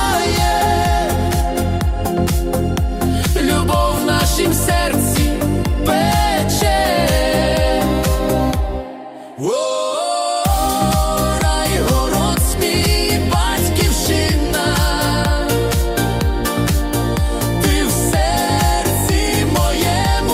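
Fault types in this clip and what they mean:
Nothing stood out as a fault on listening.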